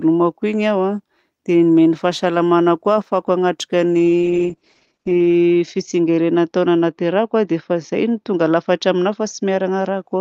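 Speech with a call bitrate drop from 4.0 s, right after "koa ahafahako hanatrika ny", lasting to the end. The encoder falls from 32 to 9 kbps, so the sound turns coarse and muffled; a spectrogram shows energy abruptly ending near 8 kHz instead of 20 kHz.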